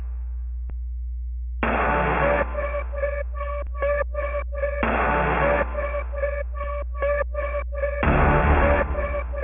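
From start to finish the sound is gritty and metallic, with harsh, unrelated tones sitting over the top and the spectrum running hard up to a ceiling at 3 kHz. This is aliasing. The sample rate was cut, which fits a drop from 44.1 kHz to 6 kHz, without first filtering away content above the new half-rate. Everything higher folded back around 3 kHz into false frequencies, landing roughly 20 dB below the wanted signal.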